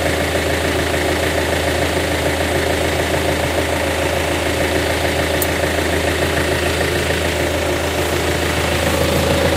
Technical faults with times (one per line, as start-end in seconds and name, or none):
none